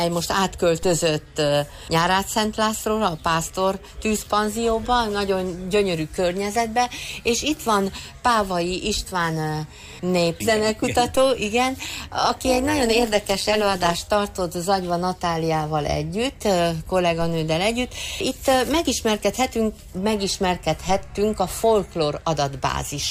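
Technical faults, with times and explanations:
0.83, 11.15, 17.22 and 20.89 s: DC step. At each of these moments the waveform's zero line suddenly shifts, as if an offset were switched into the signal path. The offset then drains away through a roughly 2 Hz high-pass behaviour, fading over a fraction of a second. The abrupt jump and its slow recovery are heard as a brief low thump or click, while the sound itself carries on unaltered.
11.76 to 13.96 s: overlap-add ripple. Here the audio appears to have been split into windowed frames and rejoined with an overlap whose windows don't sum to a steady gain. As a result the level dips and swells once per frame, by about 11 dB, at a rate of around 200 Hz. A modulation that deep and that fast is heard as a metallic buzz with extra tones around each note for those two seconds.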